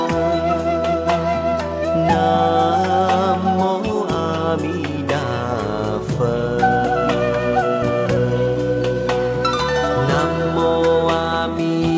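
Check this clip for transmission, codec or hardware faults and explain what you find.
I found no transmission, codec or hardware faults in this clip.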